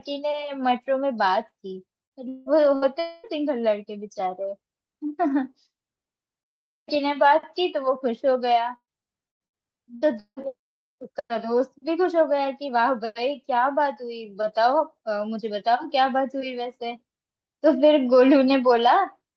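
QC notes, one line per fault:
2.05, 2.76 and 8.76 s, burst of packet loss: a short run of packets never made it, roughly 60 ms each at the first two and 120 ms at 8.76 s. The receiver stretches the last sound into a fading buzz or hiss, and at 8.76 s that fades to about 60 ms of silence before the audio picks up later, minus the lost bit.
2.29–2.49 s and 3.00–3.27 s, long network dropout: for about 180 ms and then 240 ms the last sound is held and faded rather than going fully silent, so you get a smeared buzz or hiss with a chunk skipped. That's likely a longer stall in delivery, patched by concealment the whole way.
9.29–10.47 s, repeated packet loss (robotic sound): six separate holes, the longest 170 ms, with over a third of this stretch patched by repeating the last sound. Each patch is followed quickly by the next, so the speech comes out choppy with pieces missing.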